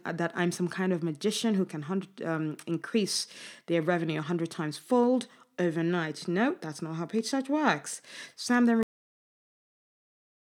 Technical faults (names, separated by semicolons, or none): cut-off end